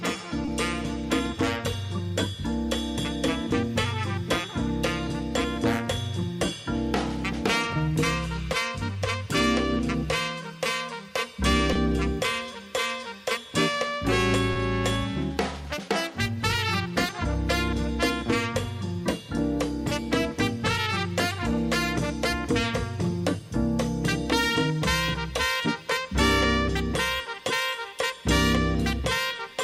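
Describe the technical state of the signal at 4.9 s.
At 4.9 s the signal is intact, with no audible fault at that moment.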